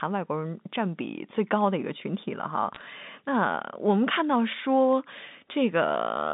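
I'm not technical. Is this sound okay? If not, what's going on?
No, not quite. There are two short bursts of crackle, around 2.75 to 2.81 s and 4.92 to 5.02 s. That's bit errors on a digital phone line: a tiny share of the data got flipped, and a bad high bit becomes a sharp tick over unchanged speech.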